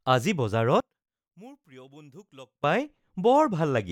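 From 0.80 to 2.64 s the speech suddenly drops by about 23 dB, leaving just a faint remnant of itself. That's most likely one channel inverted: one side's polarity is flipped, so the centred speech cancels when both channels get summed to mono.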